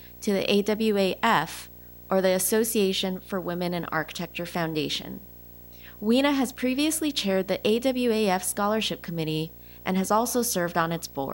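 Video or display buzz runs through the whole speech clip, from start to finish. A screen or video cable is coupling its picture signal into the audio path, so the field rate of 59.94 Hz appears as a buzz with a hash of harmonics above it. A high, thin tone at the line rate of 15.7 kHz sits on top. The interference stays at roughly 20 dB below the speech.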